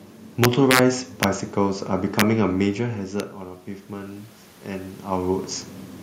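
Integer overflow strikes at 0.44 to 0.79 s, then at 1.23, 2.20 and 3.20 s. Peaks only about 0 to 1 dB past full scale wrap to the opposite sign, giving harsh cracks far sharper than clipping. The waveform shows samples jumping rail to rail, and the spectrogram shows bright full-band vertical streaks.

From 3.65 to 5.54 s, automatic gain rising sets in. The input level drops by about 13 dB, partly as the talker moves around 4.5 s, so the gain control slowly adds about 4 dB. Voice and room noise swell together, seen as a gradual widening of the waveform envelope and a brightening spectrogram floor.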